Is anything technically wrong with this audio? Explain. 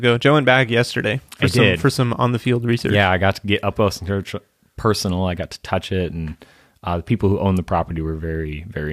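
No, nothing technically wrong turns up anywhere in this speech recording, so there's nothing here to flag.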